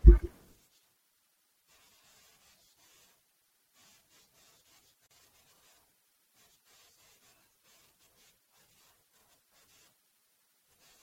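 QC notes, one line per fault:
Throughout: MP3 compression. The damage is plainly audible across the whole speech clip. Quieter detail flickers in and out from frame to frame, which gives a watery, swirly edge. Sibilants pick up a metallic chirp, and consonant attacks come out smeared. It's likely a low-rate MP3 encode, something around 64 kbps, where the encoder runs short of bits and throws away whatever its hearing model rates as least important.
5.07–5.11 s: gap at a join of encoded pieces. The speech drops into a gap of about 42 ms, with edges smeared by the codec, then picks up exactly where it stopped. That fits two separately encoded pieces butted together without trimming. The padding the encoder added to the end of the first piece and the start-up delay at the head of the second both stayed in, so together they open a short hole in otherwise continuous sound.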